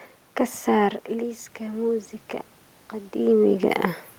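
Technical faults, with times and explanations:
0.76–2.16 s, automatic gain rising: after the input dropped by about 12 dB, near where the talker moves back around 1 s, the gain control gradually raised its gain by about 3 dB over 1.4 s, so voice and room noise swell together.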